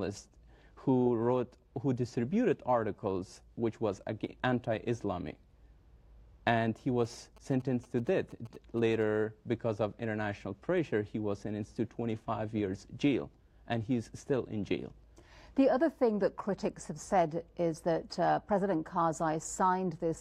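A nearby 2G phone exchanging signalling bursts with its network, with the audio circuitry rectifying that radio energy into the signal path, produces GSM signalling bursts from 7.04 to 9.03 s. Across those two seconds the audio picks up a galloping dit-dit-dit of brief buzzes repeating at about 217 Hz, the burst rate of the phone's transmission. The interference sits roughly 25 dB below the main sound.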